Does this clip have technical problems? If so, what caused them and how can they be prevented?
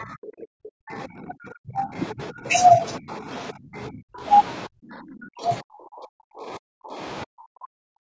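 Yes. At the very start, from 0.00 to 0.04 s, a brief scrap of the other side's voice leaking through can be heard, sitting about 10 dB below the talker. It is too short to follow, just a second voice under the first. The likely cause is a loudspeaker on the talker's device whose playback reached the microphone, with the echo canceller failing to strip out that residue. Using a headset, or a device with a better-tuned echo canceller, keeps the far end out of the microphone.

The more serious fault is speech suppressed in double talk. The talker's voice sinks, thins or drops out from 0.00 to 1.97 s, 2.13 to 2.48 s, 2.73 to 3.29 s, 3.52 to 4.27 s, 4.67 to 7.00 s and 7.25 s to the end. The lighter dips, around 2.1 and 2.7 s, fall by roughly 20 to 25 dB, while the others go down around 40 dB, close to silence. The likely cause is both sides talking at once, with the echo canceller unable to tell its own talker from the loudspeaker echo and so turning everything down. 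A headset or a full-duplex echo canceller that tolerates overlapping speech prevents this.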